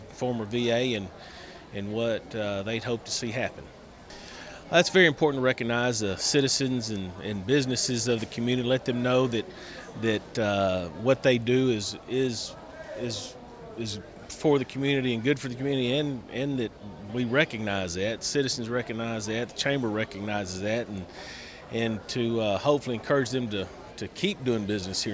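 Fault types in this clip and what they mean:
No technical faults can be heard anywhere in the recording.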